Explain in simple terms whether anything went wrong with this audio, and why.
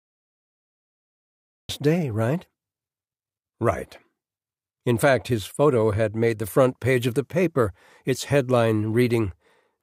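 Cut-off start, at 1.69 s: the first 1.69 seconds are complete digital silence, and then the speech switches on abruptly in the middle of a sound, just before "day right". The recording or stream began late, so whatever came before that point was never captured. Instead of rising naturally from quiet, the speech jumps in with no fade-in, and part of what was being said is lost at the start.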